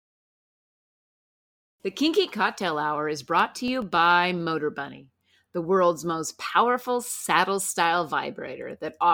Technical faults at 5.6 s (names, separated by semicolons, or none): none